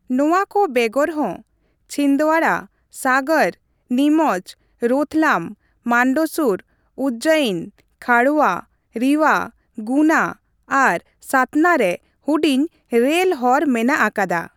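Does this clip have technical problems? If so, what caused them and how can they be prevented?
No, nothing in this speech recording stood out as a technical problem on listening, so there is nothing here that needs preventing.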